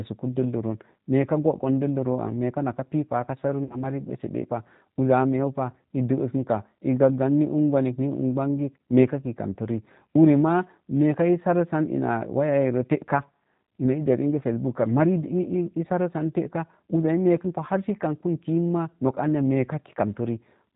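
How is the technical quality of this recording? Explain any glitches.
The technical quality is limited, with a narrowband, coded sound throughout and one audible dropout.

Throughout, the speech sounds plainly rough and slightly synthetic, with nothing above 4 kHz. This fits the G.729 codec at 8 kbit/s, which rebuilds speech from a vocal-tract filter and pitch predictor.

From 3.64 to 3.83 s, just before "ɓəseɓəpa uzza a meeu", the sound smears into a fading buzzy tone or coloured noise. This is VoIP packet loss concealed by the speech codec. The decoder stretched its last pitch and filter over about 60 ms of missing audio, and the voice stays weak or distorted while it recovers.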